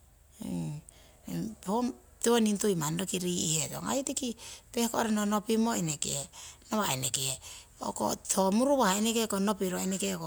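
Speech recording, no technical faults heard anywhere in the clip.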